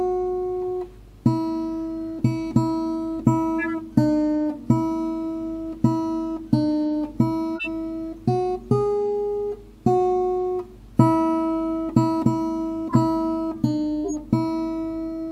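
Damaged compressed frames were decoded anyway at 3.59–3.74 s, 7.56–7.68 s, 12.89–12.96 s and 14.04–14.14 s. Each corrupt frame decoded throws energy to wrong frequencies, giving a brief chirp or noisy blip spanning two or three frames and peaking near -15 dBFS.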